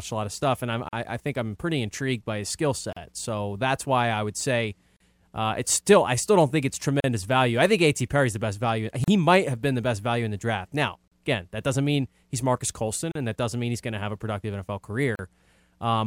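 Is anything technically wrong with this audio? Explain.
Yes. The speech has a gap at a join of encoded pieces, recurring every 2.0 s: at 0.89, 2.93, 4.97, 7.00, 9.04, 11.08, 13.12 and 15.15 s. Each is a silence of about 38 ms (41 ms at the first). The pieces were encoded separately and butted together, so each one's leading encoder delay and padded final frame remain as dead air. The speech drops out with softened edges, then resumes exactly where it stopped. That resumption, with nothing skipped or repeated, and the strict 2 s spacing distinguish it from packet loss or buffer dropouts.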